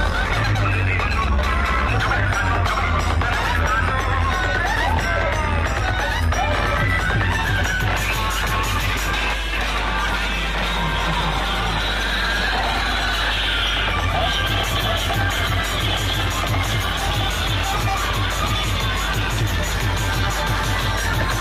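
From start to finish, power-line interference leaks into the signal path, most plausibly through a ground loop or a nearby transformer, producing mains hum at 50 Hz. It sits as a steady, droning low tone with some low harmonics, nearly as loud as the sound itself.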